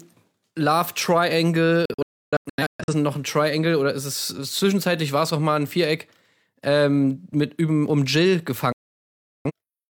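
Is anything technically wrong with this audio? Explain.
Yes. The clip contains two digital broadcast dropouts, at 1.85 to 2.93 s and at 8.72 to 9.51 s. Each time, the receiver rejected corrupted frames and muted until valid ones returned. The speech cuts to silence with a 3 ms fade, and about 0.73 s is lost each time, which fits roughly 17 discarded frames. The first dropout is several short holes, the longest about 0.3 s, before "noch ein" resumes.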